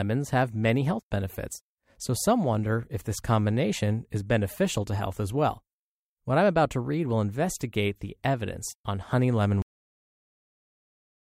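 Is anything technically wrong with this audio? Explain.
Yes. At 9.62 s the speech stops mid-sound and falls straight to digital silence, with no natural decay, for the rest of the clip. This is a cut-off end: the final buffers of audio were never written or played out, so the recording simply ends there.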